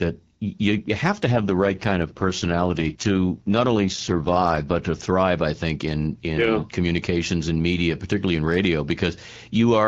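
From 1.32 to 4.80 s an AMR rate drop pushes the AMR-WB coder into a lower mode, leaving fewer bits for the speech itself. The band stays the same and there is no gap, but the speech turns rough, raspy and synthetic, which points to a fall from 12.65 to 6.6 kbit/s.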